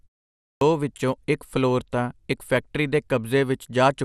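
From the first second the speech sounds dull, gurgling and granular. This is likely MP2 compression, fitting about 80 kbps. Starved upper sub-bands switch off and flicker. After a 0.44 s pause, there is a clipped start after a pause. The output device wakes too slowly, losing about 174 ms. The speech lurches in abruptly at 0.61 s, just before "ਵਿਚੋਂ ਇਕ ਫਲੋਰ ਤਾਂ".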